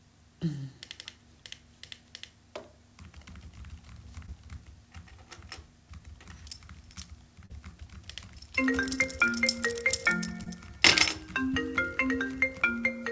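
Everyday sounds carried over a call line, here a G.722 path with nothing above 8 kHz, smear and wobble briefly at 4.26–4.30, 7.46–7.52, 9.30–9.34, 10.44–10.48 and 11.52–11.55 s. This is short concealed packet loss: 20 ms of audio, 40 ms at 7.46 s, arrived too late, and the receiver bridged each gap by extending the preceding sound.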